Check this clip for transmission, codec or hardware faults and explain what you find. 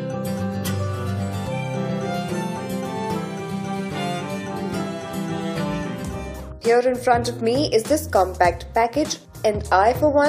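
No transmission, codec or hardware problem can be heard anywhere in the clip. Nothing in it calls for further explanation.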